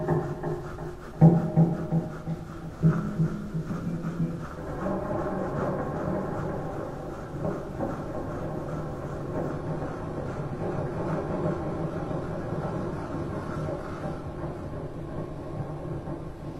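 At 9.51 s the audio drops abruptly to what sounds like an adaptive stream at a lower bitrate, and it stays that way to the end with no gap at the switch. The player evidently fell back to a cheaper version when the connection slowed. Nothing comes through above 14.9 kHz, the top end turns thin, and codec artefacts climb. That fits a jump from roughly 96 kbit/s AAC down to a 24 kbit/s HE-AAC stream.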